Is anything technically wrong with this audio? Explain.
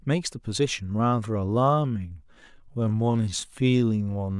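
Yes. A time-stretched section runs from 0.88 s to the end, where the speech abruptly slows to about 0.64 times its pace while the pitch holds steady. The cause is likely software lengthening the audio by repeating short pieces, leaving it dragging.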